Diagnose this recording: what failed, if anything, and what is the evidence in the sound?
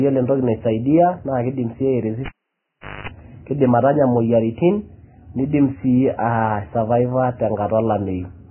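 Codec stage: the speech is heavily damaged and grainy throughout, with nothing above 3 kHz. This is likely Vorbis compression at a very low bitrate, coarsely quantising the treble.

Analogue wiring: a cable was pulled and plugged in from 2.26 to 3.08 s. The sound drops out for about 0.77 s, including 0.22 s of 50 Hz mains buzz.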